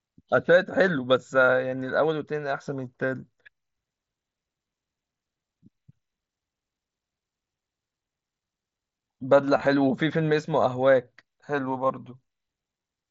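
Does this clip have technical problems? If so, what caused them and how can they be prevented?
Yes. Between 9.57 and 9.67 s there is concealed Bluetooth headset packet loss. About 45 ms of audio went missing in short gaps spread over 90 ms, the longest about 22.5 ms. Each gap was patched by repeating a matching stretch of the preceding waveform, giving a brief buzzy, slightly warbly texture. On a waveform the patches appear as repeated cycles at steady level. On a spectrogram they show as short harmonic smears against the mSBC codec's 8 kHz ceiling. Keeping the headset close to the phone, with a clear line of sight and less 2.4 GHz interference, prevents these dropouts.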